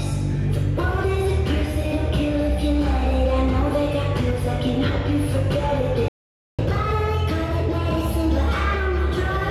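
At 6.08 s the sound cuts out abruptly in mid-flow, leaving about half a second of silence (503 ms) before resuming at 6.59 s. This playback stall is most likely the player running short of buffered data, or its output thread being blocked, until it recovered.

From 6.59 s to the end, everything runs quick and sits higher, about one and a half semitones up. This is catch-up at higher speed: the player resamples its backlog at 1.1 times normal rate to recover the time lost in the stall, raising speed and pitch together.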